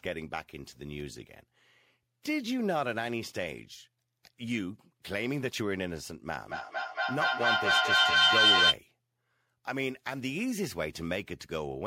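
From 6.4 s to 8.8 s the speech is swamped by feedback howl: a microphone is picking up a loudspeaker carrying the same call, and each pass around that loop comes back louder. The tone narrows to a piercing whistle around 3 kHz, peaking about 9 dB above the speech and pulsing roughly five times a second. Unlike acoustic echo, whose repeats fade, these grow until the loop is broken.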